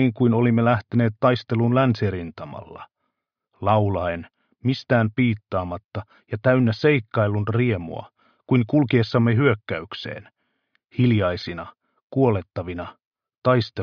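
No technical faults are audible.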